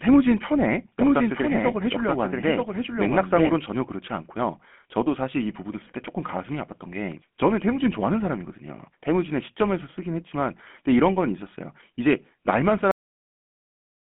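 Speech runs through a GSM full-rate codec for its whole length, and the codec damage is plainly audible. The voice has the buzzy, gravelly roughness of a codec that rebuilds speech from a vocal-tract model excited by a coarse regular pulse train, at a rate consistent with 13 kbps. A spectrogram would show energy confined between 200 Hz and 3.4 kHz, with nothing above. A cut-off end follows at 12.91 s, where the final buffers never played. The sound stops mid-utterance with no decay. The waveform drops abruptly to a flat digital-silence line that lasts to the end, and the spectrogram goes to a sharp vertical edge followed by blank black.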